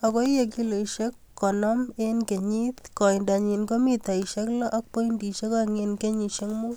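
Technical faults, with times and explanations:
4.50–6.50 s, timecode bleed: after "ko mitaisiek", 24-frame linear timecode leaks in from a neighbouring line, adding a faint chirping warble near 1 and 2 kHz, about 45 dB down.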